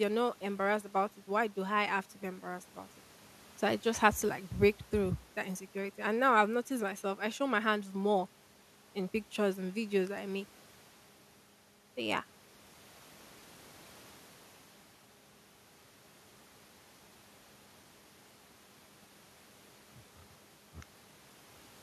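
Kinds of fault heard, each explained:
Nothing stood out on listening to the speech, and no fault could be heard anywhere in it.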